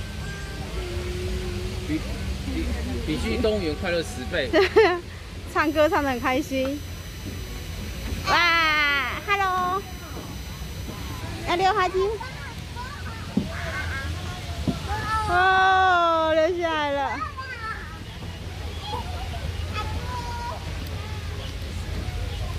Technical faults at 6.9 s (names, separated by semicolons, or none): USB whine